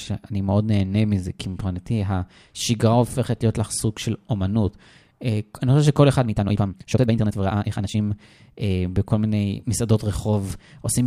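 From 6.24 s to 8.08 s the speech suddenly hurries, running about 1.73 times faster than the surrounding audio while its pitch stays where it was. The passage sounds rushed, then the pace drops back to normal just as abruptly. This is a time-stretched section, likely from software squeezing that stretch to fit a shorter length by cutting out short slices of sound to keep the pitch unchanged.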